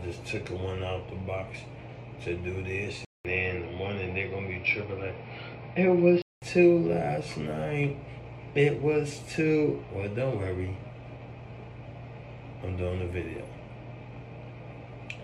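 At 3.05 s the sound drops out for about 200 ms. It then returns dull and boxy, with nothing above 5.5 kHz and a faint new noise floor well below the signal. The level barely changes. This likely reflects an input switched to a poorer device. Full clarity returns at 6.42 s.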